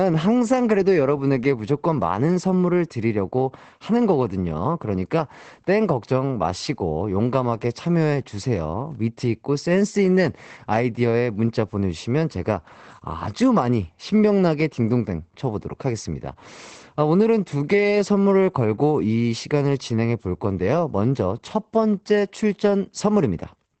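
Opus voice compression runs through the whole clip. The speech is band-limited, and a spectrogram shows a flat, empty ceiling near 8.5 kHz. Coarse linear-prediction coding leaves it muffled, hoarse and faintly robotic, which fits SILK wideband mode at around 12 kbps.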